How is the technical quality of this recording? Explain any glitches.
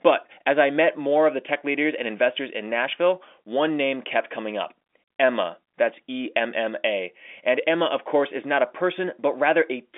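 Nothing stood out on listening; the speech comes across as ordinary telephone-band audio, with nothing that calls for explanation.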